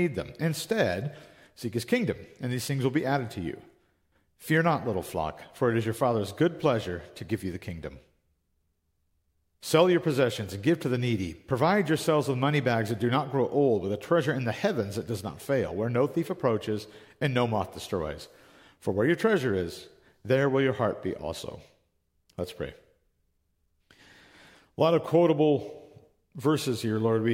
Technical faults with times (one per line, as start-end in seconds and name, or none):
none